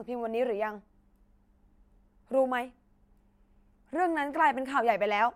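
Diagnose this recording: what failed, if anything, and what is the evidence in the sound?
Nothing failed here: listening closely, I don't hear anything in the signal chain that points to a fault at any stage.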